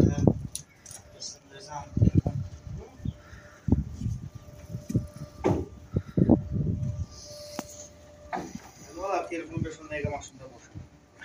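At 1.26 s a corrupt frame decoded produces a brief artifact, peaking around -30 dBFS. Damaged bits in one compressed frame were decoded anyway, placing energy at wrong frequencies. Unlike a dropout's silence or a click's broadband tick, it carries misplaced content.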